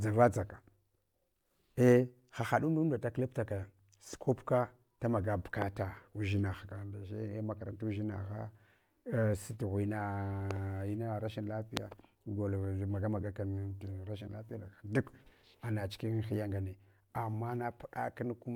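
A sudden voltage spike, likely from a plug, switch or static discharge, entered the signal path twice, each time as a single loud pop over the ongoing speech: at 5.62 s, roughly 15 dB above the speech, and at 11.77 s, much louder, around 25 dB above it.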